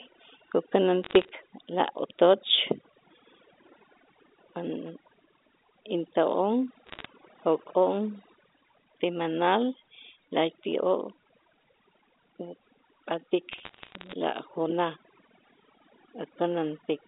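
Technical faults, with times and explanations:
Throughout: overdone noise removal. A noise reducer set far too hard has pulled individual frequency bands down to nothing wherever they sat close to its idea of the noise floor, so the background drops to near silence broken by twinkling, glassy specks, and the quieter parts of the speech are carved away with it. Unlike codec damage, the artefacts come and go with level in separate bands rather than as a steady haze tied to the signal.
1.03 to 1.29 s, 6.87 to 7.05 s and 13.52 to 14.13 s: bit errors on a digital phone line. In each stretch, sharp isolated ticks and a patch of crackle sit on top of speech that is itself unaltered, the longest burst being the last. A flipped bit in a sample's sign or upper bits throws that single sample far off its value, producing a click. The error rate sounds like a few tenths of a percent. What separates this from dropouts or packet loss is that nothing goes missing: the speech runs on continuously underneath the clicks. 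The telephone coding itself, band-limited to roughly 250 Hz to 3.7 kHz, adds little more than faint level-following noise.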